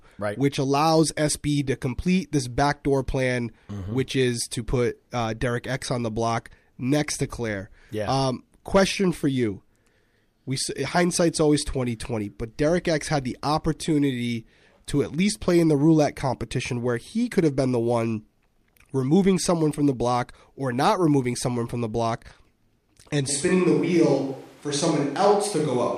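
At 23.3 s the speech suddenly goes roomy and hollow, losing its low end, and it stays that way right through to the end of the clip. The loudness barely moves, but there's more room noise under it, sitting around 30 dB below the speech. That jump is the classic sign of a switch to a distant microphone: the close mic's signal likely dropped out and a mic further away, hearing more of the room, took over.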